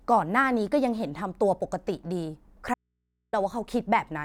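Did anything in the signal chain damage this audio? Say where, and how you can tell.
Yes. From 2.74 to 3.33 s the speech cuts out abruptly, leaving only faint mains hum far below its level for about 0.59 s. This audio dropout to a faint residue likely comes from a momentary break in the analogue wiring, exposing an open input.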